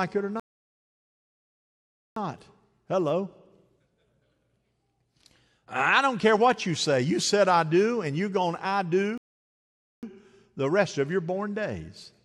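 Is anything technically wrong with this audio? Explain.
Yes. Two rebuffering stalls occur in this speech. The first runs from 0.40 to 2.16 s, right after "it or", and the second from 9.18 to 10.03 s, between "you're going to I" and "the rest of your". Each time the player exhausted its downloaded audio and halted, adding about 1.77 s and 0.85 s of dead air before picking up exactly where it stopped. On the waveform these appear as flat silent gaps, and on the spectrogram as blank vertical bands with clean edges.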